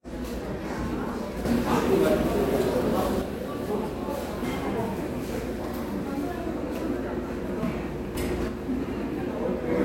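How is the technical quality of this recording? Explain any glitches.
Two level faults spoil the recording. The likely cause is a sudden gain jump, with digital gain switched between adjacent samples and no ramp, as from a setting change or bit shift. From 1.45 to 3.22 s and again from 8.15 to 8.48 s, the level rises by about 6 dB. The sound and its background noise step up together, then drop back just as abruptly at each end.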